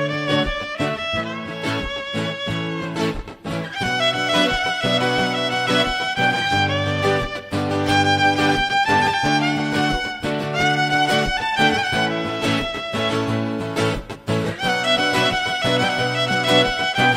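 No technical faults are audible anywhere in this recording.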